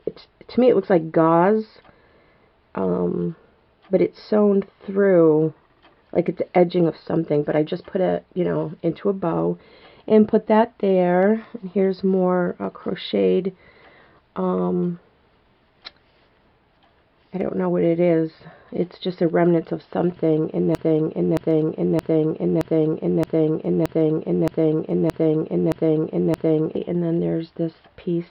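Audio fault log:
20.75–26.76 s, broken-record loop: a fragment of about 0.62 s repeats identically and back to back ten times, so for roughly 6 s the sound stops moving forward and the same short stretch cycles like a stuck groove. The exact, seamless repetition points to a player, encoder or stream that likely stalled and kept re-sending the last fragment it held. The audio that belonged in that span is missing when the loop ends.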